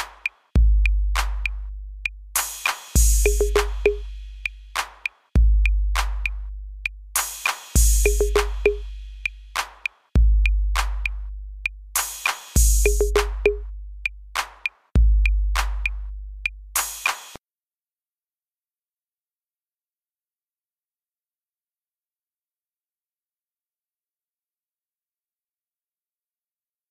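No technical faults are audible.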